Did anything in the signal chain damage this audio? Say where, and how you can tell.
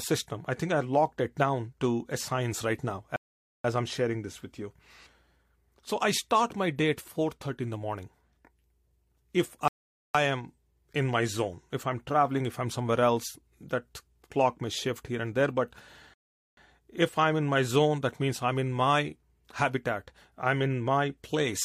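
Yes: at 3.16, 9.68 and 16.14 s the speech drops to silence for nearly half a second, then resumes unbroken. This is a playback rebuffering stall: the player's buffer ran dry.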